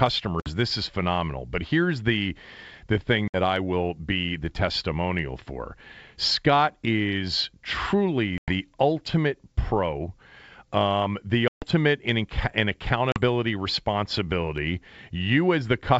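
Packet loss on an ADPCM call cuts hard-edged silent holes at 0.40–0.51, 3.28–3.40, 8.38–8.52, 11.48–11.66 and 13.12–13.20 s, appearing as flat gaps in the waveform and blank columns on the spectrogram. Each resumes slightly distorted as the decoder's predictor resynchronises.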